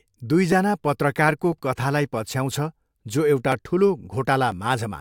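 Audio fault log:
0.52 to 4.52 s, periodic USB or driver dropouts: about 1 ms skipped every 1.0 s gives regular ticks; waveform shows abrupt joins, spectrogram thin vertical broadband lines.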